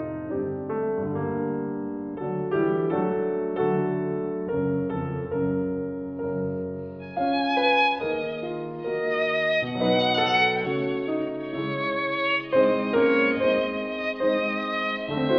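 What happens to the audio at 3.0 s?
Nothing goes wrong at 3.0 s; the audio carries on intact through that moment with no dropout, click, glitch or other fault.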